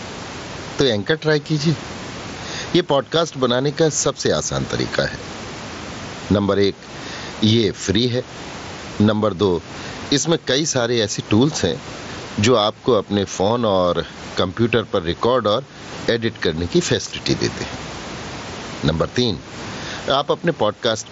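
Gain pumping throughout, likely from overdriven input gain and a fast limiter: the gain swings by roughly 15 dB under speech.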